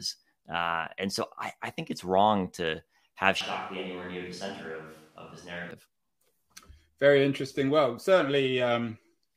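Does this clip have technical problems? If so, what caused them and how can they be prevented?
Yes. From 3.41 to 5.71 s the speech abruptly turns roomy and hollow, loses bass and drops by around 10 dB. Room noise rises to roughly 30 dB below the speech, and then the sound snaps back. This is likely a switch to a distant microphone after the close one dropped out. Monitoring the close microphone during recording and securing its power and connection prevents this.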